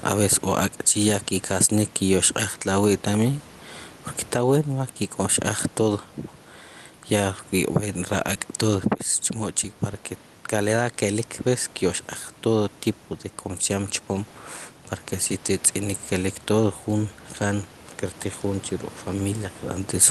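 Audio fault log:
Throughout: gain pumping. The level swings by around 10 dB, leaving the speech squashed and flat in level. The likely cause is microphone gain set far too high, with a fast limiter repeatedly clamping it down.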